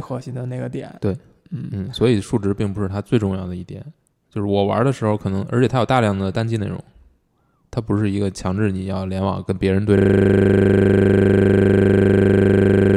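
At 9.97 s the speech collapses into a steady, rasping buzz at 25 Hz that runs to the end. This is a system hang loop: the computer or driver froze while the sound hardware kept replaying the same 40 ms slice of its ring buffer.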